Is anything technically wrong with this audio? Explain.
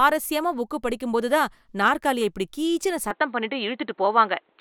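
Yes. At 3.11 s the speech abruptly turns duller and boxier and stays that way to the end. Nothing reaches above 4.3 kHz. The level shifts noticeably, and a faint new noise floor appears. There is no gap. This is likely the input switching to a poorer device.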